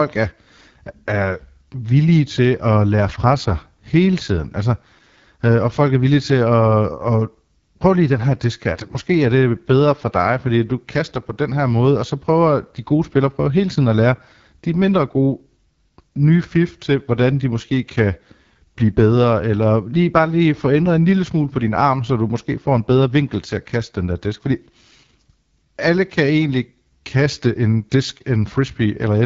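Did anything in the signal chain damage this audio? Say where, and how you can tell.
Yes. The codec stage ran AMR wideband (HD Voice) at a low rate, which fits its 8.85 kbit/s mode. Throughout the speech, the modelled band below 6.4 kHz sounds rough and raspy, noise-filled highs sit above it, and nothing remains above 7.5 kHz.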